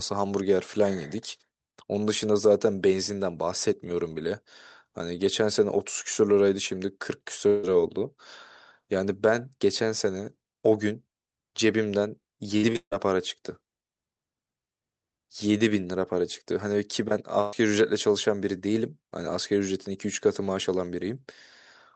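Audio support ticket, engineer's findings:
Long network dropout, 7.47–7.65 s. About 160 ms of audio missing, bridged throughout by a decaying buzz or hiss continuing the preceding sound, no silence; resumes further on. Likely cause: receiver concealment across a stalled packet stream, jitter buffer extrapolating the last frame.

Repeated packet loss (robotic sound), 12.57–13.07 s. Four gaps, longest 149 ms, about 240 ms lost in total, 59% of the span concealed. Choppy texture: each hole patched by continuing the last sound, the next following almost immediately. Network loss upstream of the jitter buffer.

Burst of packet loss, 17.41–17.54 s. Roughly 120 ms dropped, filled with a held, fading continuation of the prior sound, then resumes later with that segment absent. Short consecutive packet loss; concealment on the Opus decoder path, whose top end is cut at 8 kHz.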